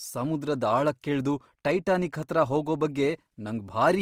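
From start to finish, the speech carries plainly audible Opus compression damage. Tones sound rough and grainy rather than clean. There is little swirling or hollow gapping. Instead, a fine noisy texture sits inside the sound. This likely comes from an Opus encoder in its music mode, at a rate that fits roughly 24 kbps. That mode keeps each band's energy but refills starved bands with copied or noise content. Bandwidth stays full, reaching about 20.4 kHz.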